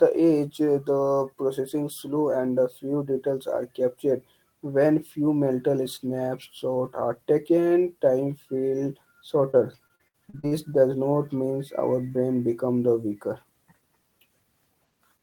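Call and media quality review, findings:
Repeated packet loss (robotic sound), 9.51–10.53 s. Choppy speech with pieces missing. Seven holes up to 63 ms, a quarter of the span patched by extending earlier sound. Network path.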